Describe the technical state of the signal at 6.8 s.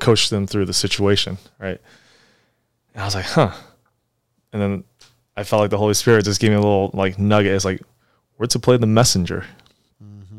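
At 6.8 s the speech signal is intact, with no audible fault at that moment.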